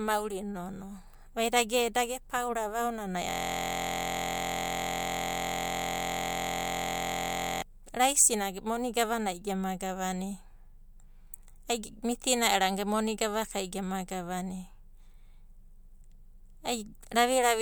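A system hang loop runs from 3.30 to 7.62 s in this speech clip. The audio suddenly stops progressing and becomes a steady buzz: one 23.22 ms fragment repeats exactly, nearly two hundred times, at a loop rate of 43.1 Hz. The computer or its audio driver froze while the sound hardware kept replaying the same ring buffer, and that period fits a 1024-sample buffer.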